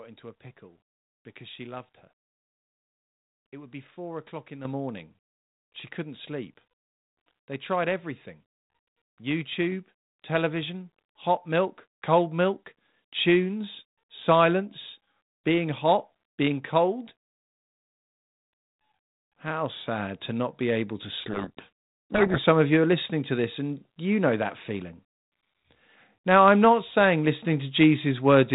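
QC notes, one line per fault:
4.65 s and 9.72 s, microphone volume stepped up: the voice and the room background rise together in a single instant jump, about 9 dB at 4.65 s and a smaller step of about 2 dB at 9.72 s. Because both rise by the same amount at once, the change is a gain setting being raised at the input. It is not the talker getting louder. The call software appears to have judged the microphone too quiet and raised the device's input volume twice, leaving the rest of the clip at the higher level.
21.2–22.4 s, codec payload misread: for about 1.2 s the speech is buried under harsh, gritty distortion, then it returns cleanly. The surrounding audio has the narrowband, lightly hissy character of G.726 ADPCM, consistent with the 32 kbit/s DECT-style rate. During this stretch the decoder is taking in frames that look valid but with the bits of each G.726 code word in the wrong order. 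Every sample difference is therefore rebuilt from scrambled values, and that produces the rasping distortion until both ends agree on the packing again.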